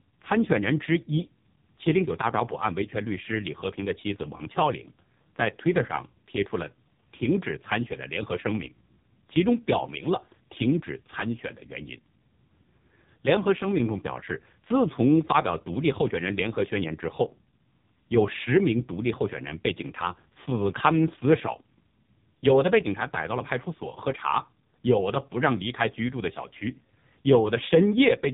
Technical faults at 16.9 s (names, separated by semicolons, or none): AMR narrowband mobile codec